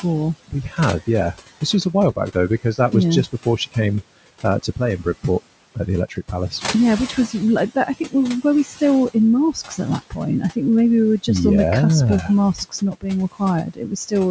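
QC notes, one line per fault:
throughout: noise suppressor artifacts. The room noise, about 18 dB under the speech, is pushed down by about 17 dB, so the background sinks in the pauses and swells back under each phrase as the suppressor decides frame by frame what counts as steady noise.
0.03–10.57 s and 12.28–14.13 s: speech cut by the noise suppressor. Quiet parts of the speech are treated as background and pulled down by as much as about 18 dB, so soft consonants and word endings sound swallowed. The cuts add up to roughly a second in the first stretch, which ends just before "maybe we were just", and about half a second in the second, which begins just after "on the cusp of".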